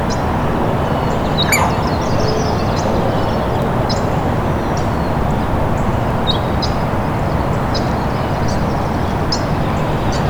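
At 3.62 s and again at 6.11 s there is a bit error spike: a single sharp tick, broadband and unrelated to the surrounding audio. Each click is consistent with one corrupted sample, where a flipped bit made the value jump by a power of two and immediately return. The first reaches about -10 dBFS and the second about -16 dBFS, so the earlier tick is the larger of the two.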